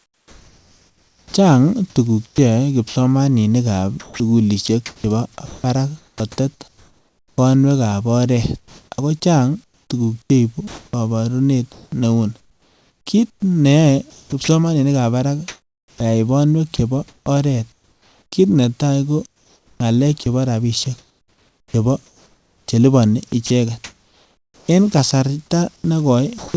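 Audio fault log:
0–1.34 s and 25.76–26.54 s, comfort noise in place of the background: In the pause before speech begins, a steady, featureless hiss replaces the room background, about 4 dB quieter than that background, which sits about 35 dB below the loud parts. At the end it fills about 0.24 s. Unlike chopping, no speech is lost. The likely cause is discontinuous transmission, with the receiver synthesising noise.
2.26–2.96 s, 4.00–7.38 s, 8.58–14.48 s, 15.48–18.32 s, 19.26–24.68 s, sound chopped by the voice detector: Within each stretch, quiet syllables and word edges repeatedly give way to synthetic noise, totalling 0.2 s, 1.5 s, 2.18 s, 1.32 s and 2.84 s. The likely cause is the sender's voice detector switching on and off several times rather than once.
26.38–26.54 s, sound dropped by the voice detector: The last 80 ms of speech are cut off and replaced by steady noise for 0.16 s. 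This is a single cut, not a repeated flicker. The likely cause is the detector mistaking the sound for background. Nothing above 8 kHz is heard, which fits a wideband call codec.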